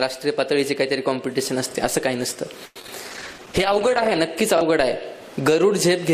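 A short audio clip with repeated packet loss (robotic sound) from 2.65 to 2.89 s: five holes, the longest about 100 ms, mostly patched by stretching prior sound, giving a choppy texture. A call bitrate drop follows from 3.09 to 4.26 s, where the audio turns coarse and muffled with highs cut off. This is consistent with the encoder falling from roughly 96 to 14 kbps for about 1.07 s.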